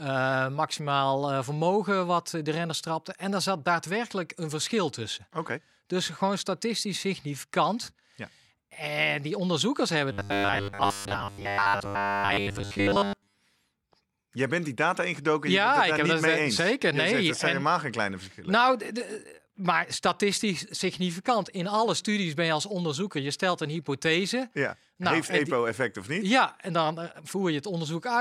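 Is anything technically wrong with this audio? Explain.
Yes. From 10.12 to 13.37 s the speech becomes a metallic 100 Hz buzz, robotic sound from repeated short buffers, likely a 10 ms chunk looped while most real audio is skipped.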